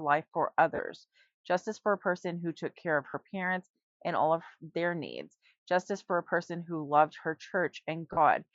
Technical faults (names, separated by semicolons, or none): lost LE Audio frames